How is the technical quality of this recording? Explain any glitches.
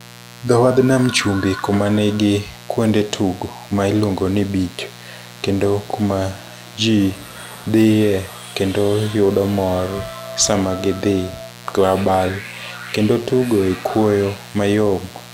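The recording is marred by a mains buzz running under the speech for its whole length. Sharp switching spikes at twice the 60 Hz mains rate, 120 per second, add harmonics reaching several kHz. That gives a raspy buzz about 20 dB below the speech, not the smooth low tone of plain hum.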